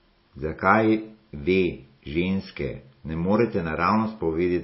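A short stretch of speech, and it's been squeezed hard the whole way through. Nothing comes through above 5.6 kHz, so the top end is just gone, and the s sounds come out watery and swirly, with a smeared, chirpy edge. That's the classic picture of MP3 compression running short of bits: the encoder chops the treble at a fixed point and lets weak detail flicker on and off, which fits a low bitrate, likely around 24 kbps.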